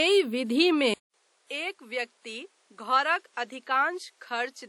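From the start the speech has a ringing, washy quality, with a hiss that swells and fades along with the voice and nothing above about 19.3 kHz. This is plainly audible WMA compression, most likely at a low bitrate consistent with about 48 kbps. The transform codec spreads its quantisation noise over tens of milliseconds around each sound and drops weak detail, leaving that smeared, breathing texture.

At 0.94 s the audio cuts out for about 200 ms. When it returns, it is duller and noticeably quieter, roughly 10 dB down, with nothing above about 11.8 kHz and a faint new background noise well below the speech. This lasts to the end of the clip. The likely cause is an input switched to a poorer device mid-recording: the gap is the handover, and the narrower band, lower level and different noise floor belong to the new device.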